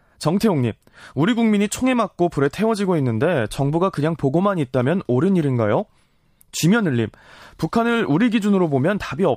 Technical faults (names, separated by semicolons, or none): none